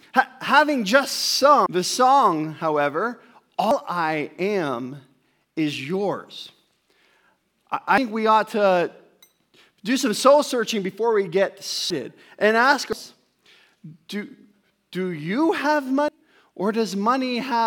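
Compressed frames skipped, six times: 1.66 s (between "having just" and "the song however"), 3.71, 7.98, 11.9 (between "searching before we get" and "and ask"), 12.93 and 16.08 s. Each jump loses a handful of roughly 85 ms frames, from about 0.15 s up to about 0.7 s of speech, and the audio jumps ahead at each join.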